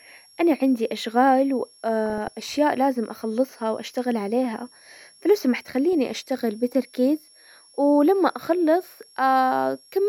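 A switching power supply is running in an audible burst mode or beating with another one, and its switching frequency leaks into the signal as a switching supply whistle for the whole clip. The result is a thin, high tone wandering within roughly 5.5 to 5.6 kHz, sitting about 30 dB below the speech. It is faint.

From 2.06 to 2.32 s, between "انا عندي اشغال" and "لازم اخلصها واشتغل عليها", weak DAB reception lets bit errors slip past the error correction into the MP2 stream. A fraction of a percent of bits are corrupted, so wrong samples put short noise blips in single sub-bands, and wrong scale factors, where they get through, make sub-bands jump in level for up to a frame. This is DAB burbling: a quarter-second of blips and level jumps, which fits roughly a dozen damaged frames.

The same DAB burbling returns from 5.93 to 6.14 s, between "واشتغل عليها فلو سمحت" and "بتركيز ولما". The errors again reach the MP2 data, putting blips into single sub-bands and making them jump in level where wrong scale factors get through, producing a slightly shorter burst, consistent with around ten corrupted frames.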